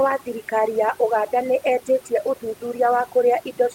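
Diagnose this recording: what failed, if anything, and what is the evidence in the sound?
The call-processing stage failed: overdone noise removal ran throughout, its suppressor pulling any frequency band near its noise estimate down hard. The room noise, about 30 dB below the speech, collapses into near silence with twinkling specks, and quiet speech components vanish too.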